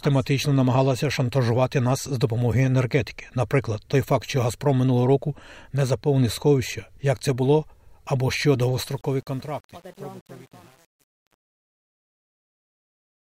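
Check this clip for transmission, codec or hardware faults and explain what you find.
There's one fault here: truncation distortion on the fade-out. Right after "це було або що", from 8.84 s to the end at 13.27 s, the fade stage drops bits without dither, which fits an 8-bit path. From 9.1 s the speech turns gritty as the level sinks toward the smallest step.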